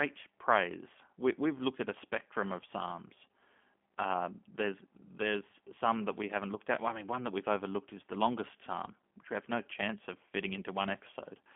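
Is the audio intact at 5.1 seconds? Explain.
No. At 5.1 seconds, as throughout, the speech sounds narrow, slightly rough and synthetic, with nothing above about 3.5 kHz. This is G.729 codec damage: the voice is rebuilt from a vocal tract filter, pitch predictor and sparse pulses, which fits an 8 kbit/s VoIP stream.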